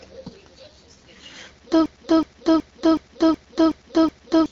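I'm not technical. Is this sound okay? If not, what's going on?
No. Two things are wrong. Throughout the whole clip the speech sounds rough and raspy, like a poor phone call. That is the AMR wideband (HD Voice) codec, the squeezing method used for HD phone calls. Here it runs at one of its lowest-quality settings, so too little detail survives. The speech's natural smoothness is replaced by a grainy, gritty texture.

The second problem starts at 1.86 seconds. The same short snippet of sound, about 0.37 seconds long, repeats over and over, about 2.7 times per second, until 4.46 seconds, giving a stuttering, stuck-record effect. This is a system hang loop. The computer froze, while the sound hardware kept replaying the last chunk it held. About three seconds of real audio are missing as a result.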